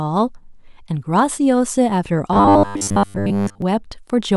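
From 2.33 to 3.62 s the speech turns into robotic sound from repeated short buffers: a rigid, metallic buzz fixed at 100 Hz that still loosely tracks the words. The likely cause is audio arriving too seldom, so the playback side loops the last 10 ms chunk to fill gaps for most of that stretch while real audio is skipped. Unlike a plain stutter or dropout, it buzzes steadily at one pitch rather than going silent or clicking.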